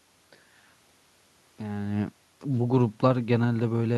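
Nothing goes wrong on the system side here: the room noise underneath is just part of the space, and the way the voice shifts in level around a second and a half in is simply the talker moving relative to the microphone.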